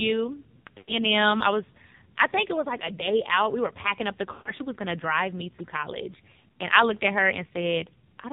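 Throughout, the voice sounds buzzy, thin and synthetic, with nothing above 4 kHz. This is heavy AMR narrowband mobile codec damage: the speech is rebuilt from a coarse vocal tract model and a few pulses, and the harshness fits a low mode near 5.9 kbps.

From 0.78 to 1.05 s, and again from 4.32 to 4.53 s, the voice is drawn out, fades toward silence, then returns weak or rough. These are lost AMR speech frames. Roughly 100 ms and 140 ms of speech went missing, so the decoder repeated the last good pitch and vocal tract settings with falling gain.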